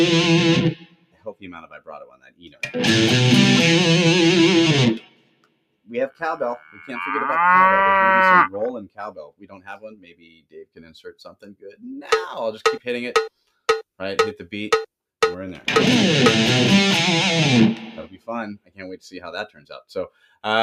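A noise suppressor built for speech has been left running on this non-speech sound, treating steady tones, ambience and tails as noise, so the level swings by around 10 dB and the sound pumps and thins. Unlike compressor pumping, which follows loudness, this follows steadiness: sharp attacks pass while sustained parts sink. Sound cut by the noise suppressor is clearest at 0.75–2.62 s, 4.99–5.9 s, 8.85–11.84 s, 18.07–18.28 s and 18.54–18.81 s, dipping by about 18 dB, with shallower cuts at 6.58–6.9 s (about 11 dB) and 19.48–19.71 s (about 14 dB). These are not dropouts, because the sound fades rather than vanishing abruptly.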